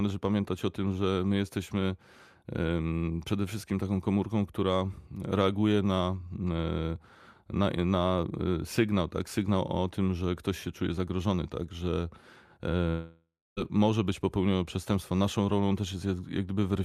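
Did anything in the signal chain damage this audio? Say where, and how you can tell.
Yes, there's a long network dropout from 12.89 to 13.59 s. The speech stops mid-flow and the receiver keeps smearing the last bit of sound forward as a fading buzz for a few tenths of a second, then it sinks into near-silence for about a quarter second before the voice resumes. Roughly 0.68 s of speech is simply gone, likely packets lost in transit, with concealment papering over the gap rather than recovering it.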